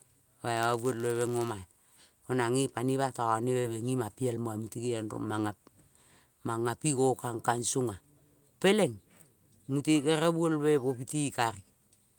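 From 0.56 to 2.04 s there's a block size mismatch, padded: one stage hands over slightly shorter blocks than the next one reads, and the leftover space in each block gets filled with zeros. That drops a tiny silent gap into every block, which you hear as a buzz at about 99.6 Hz laid over the speech. The padding also stretches things very slightly, so that stretch runs at 0.996 of normal speed.

Then at 3.60 to 3.66 s there's a short concealed packet loss. About 40 ms of the call didn't reach the decoder in time, so the receiver covered the hole by carrying on the last bit of sound, extending the pitch if it was voiced or generating shaped noise if it wasn't, before crossfading back into the real signal. It comes across as a quick smear or wobble in the speech.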